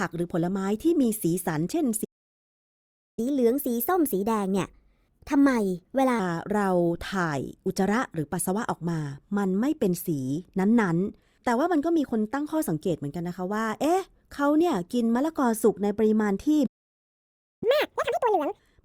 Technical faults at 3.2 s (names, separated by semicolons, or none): playback stall; catch-up at higher speed